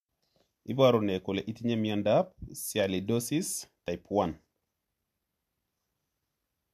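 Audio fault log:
3.88 s, overlap between stream segments: there's a tiny skip here, because two chunks of the speech stream claimed the same bit of time and the player trimmed the overlap, so about 12 ms of real sound goes missing and the waveform jumps, which suggests segments roughly a second long.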